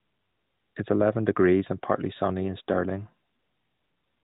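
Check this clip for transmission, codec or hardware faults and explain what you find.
No transmission, codec or hardware faults turn up in this speech, which carries the narrowband mobile sound of the AMR narrowband codec, with everything above 4 kHz missing and only light coding texture, consistent with its highest 12.2 kbps mode.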